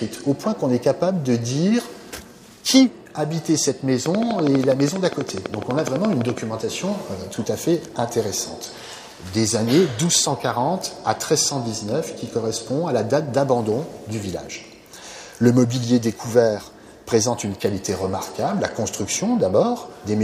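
A train of clicks runs from 4.06 to 6.39 s: around thirty similar pulses at a regular 12.1 per second, peaking roughly 15 dB above the surrounding audio and audible as steady ticking. The likely cause is interference from nearby equipment or a faulty connection or power supply.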